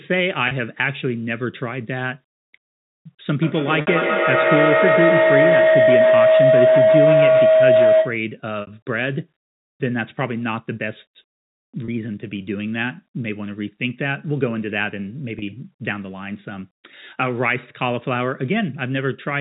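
At 0.48 s there is a brief packet loss with pitch repetition. About 30 ms of speech goes missing, which fits one lost packet. The receiver fills the gap by repeating the last pitch period, so the sound holds briefly with a faint buzz.

From 3.42 s to 8.3 s a feedback howl builds. Two devices in the same room are joined to one call. Sound leaves a loudspeaker, reaches a microphone and returns louder each time. The repeats narrow to a tone around 700 Hz. The loop's delay is about 150 ms. At its peak it sits about 7 dB above the speech.

Inside the howl, at 3.81 s, a 60 ms loss occurs. Another follows at 8.61 s. Each fits two lost packets. The repeated pitch period fades toward silence before the speech cross-fades back.

Single 30 ms losses recur at 11.85 s and 15.39 s. Both give the same short, held buzz. Through all of this the narrowband telephone sound of G.711 coding can be heard.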